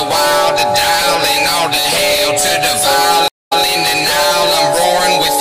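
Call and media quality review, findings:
Stream reconnect at 3.28–3.63 s: about 217 ms dropout, then playback resumes roughly 131 ms earlier than where it cut off, repeating a short stretch. Probable component: network or streaming client. Connection dropped, and a fresh decoder restarted mid-stream from a resent burst.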